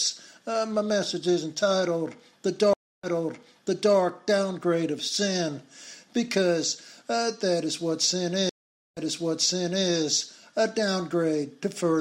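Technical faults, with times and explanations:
2.73–3.96 s and 8.49–9.89 s, stream reconnect: The connection drops and the player goes silent, for about 0.3 s the first time and 0.47 s the second. It then reconnects and starts a new decoder partway through the stream. Each time the sound picks up earlier than where it stopped, by 0.93 s and then 0.92 s. That backward jump suggests the server resent a burst of buffered audio, so a short stretch is heard twice.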